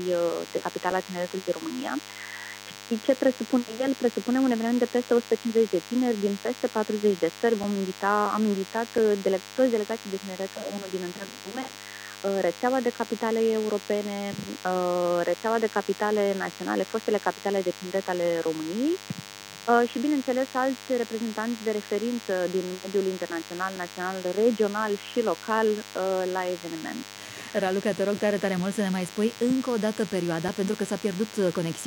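A DECT cordless phone buzz runs through the whole recording: a thin, steady buzz at 100 Hz, sitting roughly 15 dB below the wanted sound. A nearby DECT handset or base station transmits a short radio burst every 10 ms, and the audio circuitry rectifies that RF into the signal path. On a spectrogram it shows as an unbroken comb of lines at 100 Hz and its many harmonics, stretching well up the spectrum. In the waveform it appears as a regular train of narrow pulses spaced 10 ms apart.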